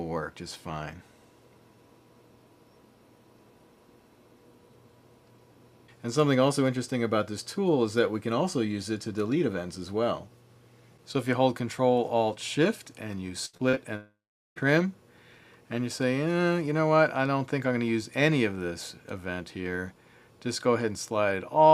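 Two closely spaced network faults sit in the middle of the audio. From 13.45 to 13.78 s there is repeated packet loss (robotic sound): four short holes, the longest about 76 ms, each patched by stretching the preceding sound, so close to half of that third of a second is synthetic fill. That gives a choppy sound with fragments missing. Unlike a single long outage, the sound keeps returning between the holes. Then, from 13.96 to 14.58 s, the audio breaks off entirely. A brief fading continuation of the last sound gives way to about 420 ms of silence before the signal resumes, and roughly 600 ms of material never returns. That one sustained gap ending in silence, rather than rapid stutter, marks it as a long network dropout, most likely a stall in delivery that concealment could only briefly bridge.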